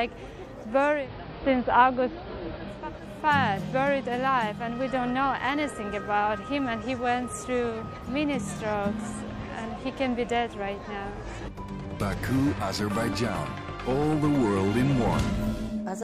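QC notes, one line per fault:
0.87–2.9 s, digital radio blending to analogue: the receiver loses its digital stream and cross-fades to the station's AM broadcast, then returns. The switch takes about 230 ms. Once on AM, the treble falls away and the sound turns dull. A faint hiss rises, well below the programme. The level shifts by about 3 dB because the two paths are not matched in loudness.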